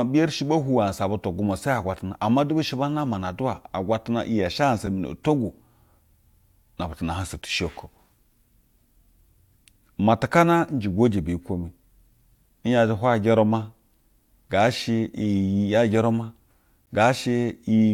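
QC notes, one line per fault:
4.86 s and 16.86 s: gap between stream segments. Hard-edged silences of about 5 ms (just before "mi na nto gwu") and 13 ms, consistent with 6-second segments whose timestamps don't meet. Padding adds time without removing audio. They show as near-silent notches in the waveform and thin blank vertical stripes on a spectrogram.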